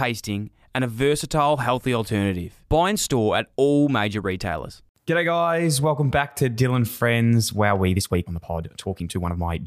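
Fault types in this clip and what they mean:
Time-stretched section: From 7.81 s onward, speech runs 1.61 times faster at unchanged pitch. It sounds rushed, likely from software squeezing it.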